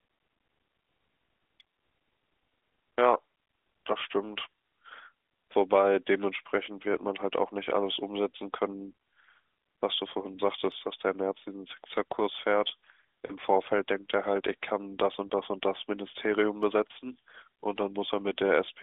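Lost AMR speech frames at 13.26–13.35 s and 15.28–15.32 s, fitting two and one 20 ms frames: the decoder repeats fading parameters, showing smeared harmonics and brief amplitude dips.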